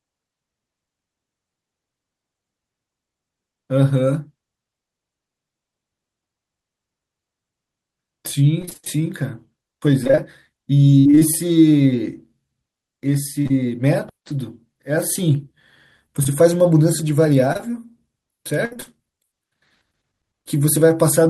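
From 8.61 to 9.02 s the audio turns choppy. This is repeated packet loss, producing a robotic sound: a string of short dropouts, none longer than about 26 ms, each filled by stretching the preceding sound, so nearly half of this span is synthetic. The same fault returns from 10.04 to 11.23 s, more thinly spread but with holes up to about 59 ms. On a spectrogram these stretches show repeated, smeared harmonic segments with abrupt seams. In the waveform the envelope looks stepped and unnaturally even.

From 13.43 to 13.52 s there is short concealed packet loss: two back-to-back holes of about 20 ms of missing audio each, patched by continuing the last pitch or noise and then blended back. It registers as a brief smear or wobble. Another occurs from 16.24 to 16.27 s. Each shows as a thin vertical band where fine spectral detail blurs, with a small discontinuity in the waveform.

Repeated packet loss returns from 17.53 to 18.99 s, with scattered gaps up to about 60 ms and the same robotic texture and patchy spectrogram seams.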